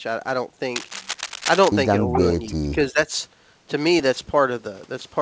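From 0.76 to 1.68 s, a worn cable, connector or control was likely being handled, its contact resistance jumping about rapidly as it moved. That is cable scratch noise: dense, irregular bursts of crackle and rustle laid over the speech for nearly a second, about 5 dB below the speech itself.

Between 2.47 and 3.11 s, both ends were likely talking at once, and the echo canceller, unable to tell the local talker from the returning loudspeaker echo, pulled the level down on everything. This is speech suppressed in double talk. Across roughly half a second of that span the speech dips, falling at its deepest by about 15 dB while the far side is active. Through all of it the call path's band limit holds, with nothing above 8 kHz, which fits G.722 at 64 kbps.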